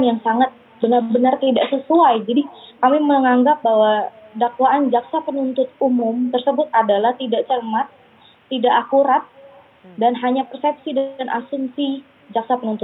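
No technical faults can be heard anywhere in this audio.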